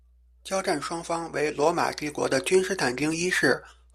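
A ground loop or stray field from a nearby transformer has let the 60 Hz power line leak into the signal chain, so mains hum sits under the speech for the whole clip. It is a steady, low buzz-like tone at 60 Hz with some low harmonics, running at roughly 30 dB below the speech level.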